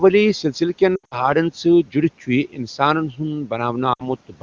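Lost AMR speech frames first appear from 0.95 to 1.29 s, just after "سلسِلہٕ کٮ۪ن". Radio errors made frames fail their checksum, and the wideband decoder filled each gap by repeating the last good pitch and vocal tract settings at falling gain. About 140 ms went missing, scattered over 160 ms, which fits roughly seven 20 ms frames. The longest unbroken run is 80 ms, heard as a brief warble that drops to near silence before the speech snaps back slightly rough.

Speech cut by the noise suppressor follows from 2.5 to 2.8 s, after "چھُ یہِ". The suppressor mistook part of the speech for background noise and pulled it down by up to about 11 dB, so the affected stretch, around a tenth of a second in total, sounds swallowed and faint. The same thing happens again from 3.11 to 3.2 s, with a similar dip of about 11 dB that thins out the sound briefly.

Lost AMR speech frames return from 3.94 to 4.07 s, where 60 ms is missing, consistent with about three frames. 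The decoder again repeats the preceding sound with fading level before the speech resumes.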